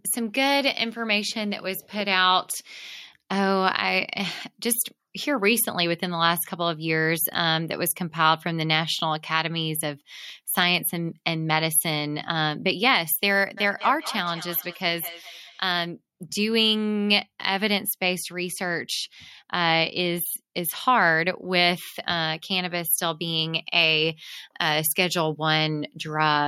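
It's a speech recording with two separate problems. From 10.30 to 10.79 s you get CD scratch ticks: four short clicks, the longest around a millisecond. A blemish on the disc is wiping out more data than error correction can rebuild each time that spot comes round, so the player patches or mutes those samples and you hear a brief tick per rotation. Then, from 13.57 to 15.79 s, there's feedback echo between two devices. The speech returns roughly every fifth of a second, peaking at about 14 dB below the speech itself. That points to two devices on the same call in one room, where one plays back what the other's microphone sent and that microphone picks it up again. Each device's echo canceller only removes its own playback, so the loop isn't caught.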